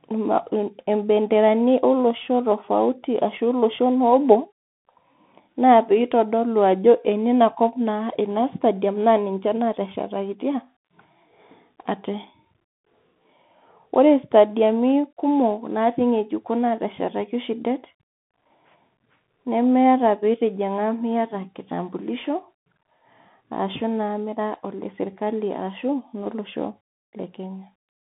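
From start to finish the speech is thin, boxed-in and dull, with no air above about 3.8 kHz and little body below 150 Hz. S sounds come through scratchy, and a grainy hiss sits under everything. This is the Bluetooth CVSD headset codec: the line is squeezed to roughly 150 Hz to 3.5 kHz, and each sample is coded as a single up-or-down bit with an adapting step, which fits a 64 kbps stream. Fast, bright sounds outrun that step and distort plainly.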